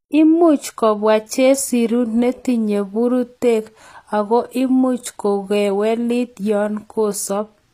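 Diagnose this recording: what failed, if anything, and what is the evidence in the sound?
The codec stage failed, and the damage runs through the whole speech clip. The treble sounds bright but synthetic. S sounds come out gritty and lispy, and the codec damage is plainly audible. Nothing is present above 14.9 kHz. The likely cause is HE-AAC compression at a low rate, which fits roughly 24 kbps. The codec keeps only the lower spectrum and rebuilds the highs by copying bands upward. Those copied harmonics don't line up.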